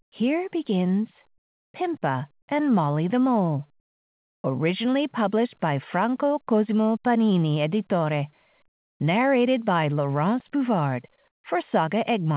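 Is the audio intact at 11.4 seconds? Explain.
No. From 11.28 to 11.44 s the real background is replaced by comfort noise, likely from discontinuous transmission. A steady, featureless hiss about 19 dB quieter fills the pause, showing as a smooth, flat band below 4 kHz and a uniformly low waveform.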